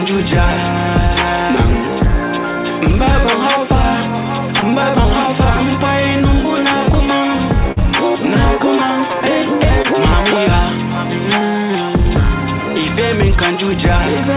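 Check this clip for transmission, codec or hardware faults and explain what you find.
Three brief dropouts are present, all of the same kind, heard over a band-limited channel that stops at 4 kHz, which fits a G.711 A-law call path.

Short concealed packet loss at 4.60 to 4.64 s, 7.72 to 7.78 s and 9.82 to 9.86 s: each is a momentary smear or wobble where the sound briefly loses its detail. About 20 ms of audio went missing at the first and last points, and about 40 ms at the middle one. The receiver covered each gap by extending the preceding sound and then crossfading back into the real signal, and the middle event lasts longest.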